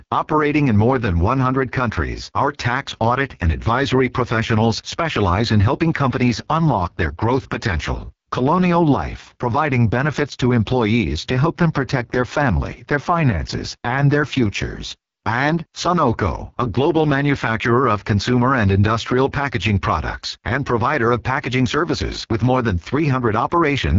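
From start to finish the speech carries the sound of the AMR wideband (HD Voice) codec running at what sounds like its lowest rate, around 6.6 kbit/s, and the damage is heavy. At that rate the vocal tract model gets too few bits, so voiced sounds come out rough and raspy with a buzzy, grainy texture. Nothing is present above 7 kHz, and the uppermost band has the hissy, synthetic quality of filled-in noise.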